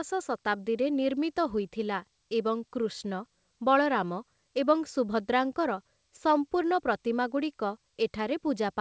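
No technical faults are audible in this speech.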